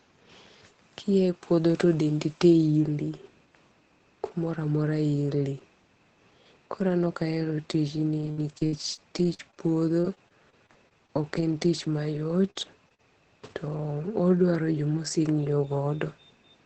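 From 8.21 to 13.00 s, repeated packet loss makes the speech choppy. Gaps up to 59 ms are patched by stretching the preceding sound.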